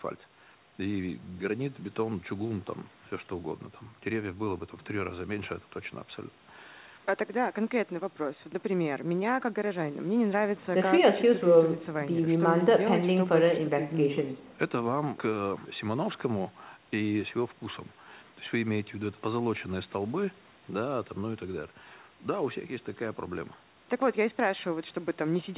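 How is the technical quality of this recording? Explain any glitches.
Nothing stood out on listening to this speech, which has the narrow, telephone-like sound of a call line that carries nothing above 4 kHz.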